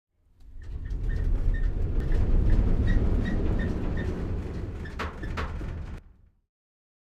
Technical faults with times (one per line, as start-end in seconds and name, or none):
2.00-5.98 doubled audio track